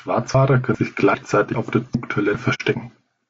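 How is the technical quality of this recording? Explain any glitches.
The recording has clear technical problems: codec coarseness throughout, regular skips, and one brief muted hole.

Low-delay AAC compression: The likely cause is AAC-ELD at a low rate, consistent with about 32 kbps. Its short frames resolve pitch harmonics poorly and starve the encoder of bits, so the speech sounds plainly rough and grainy, with noise filling between harmonics and a thin, synthetic-sounding top end.

Audio missing between chunks: The audio was likely processed in half-second chunks, and a piece went missing at each handover before the two sides were joined without silence. You hear abrupt skips at 0.35, 0.75, 1.15, 1.55, 1.95, 2.35 and 2.75 s, each dropping about a tenth of a second.

AAC frame loss with muting: From 2.54 to 2.62 s the decoder zeroed the spectrum of missing frames, which fits two lost frames, and the overlapping windows faded the sound out and back in. 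The result is a soft-edged 60 ms hole rather than a hard cut.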